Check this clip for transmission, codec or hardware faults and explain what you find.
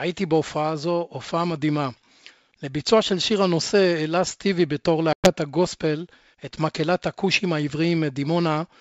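One transmission fault is present in this G.722 wideband speech. From 5.13 to 5.32 s, between "הנושא העלה סטיבי בתור" and "הגוספל את מקהלת הכושים", the sound drops into an abrupt silent hole and comes back briefly unsettled. This is packet loss on an ADPCM call. About 110 ms, around ten packets' worth, went missing, which threw the decoder's predictor and step size out of step with the sender's until they realigned.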